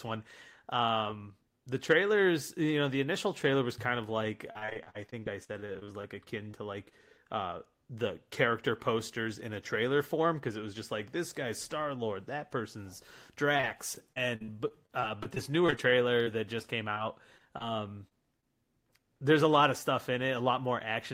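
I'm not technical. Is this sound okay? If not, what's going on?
No. From 4.51 to 6.55 s and again from 13.57 to 18.44 s there is repeated packet loss, which gives a robotic sound. Small pieces of the speech never arrived, 18 times and then 22 times. Each hole, up to about 47 ms, was patched by stretching the last sound, so the voice turns choppy.

From 10.17 to 11.45 s there is a jitter buffer speed-up. Delayed audio arrived in a bunch, and the receiver trimmed tiny slivers, about a twentieth of a second in all, to catch up. The speech plays about 4% faster at the same pitch.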